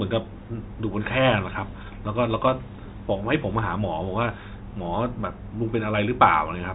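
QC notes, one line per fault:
No faults to note.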